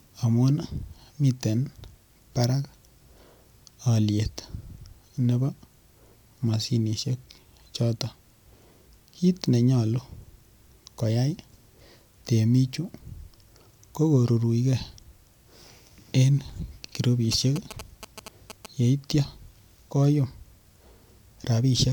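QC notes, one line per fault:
17.32–18.66 s, GSM signalling bursts: a galloping dit-dit-dit of short 217 Hz buzzes, roughly 15 dB below the speech, from a nearby phone's radio bursts rectified by the audio circuit; intermittent, unlike steady mains hum.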